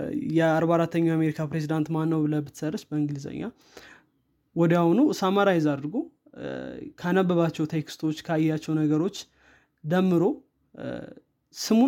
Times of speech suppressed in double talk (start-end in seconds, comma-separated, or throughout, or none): none